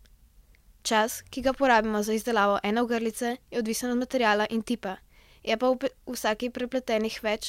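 Nothing in the speech stood out as a technical fault on listening.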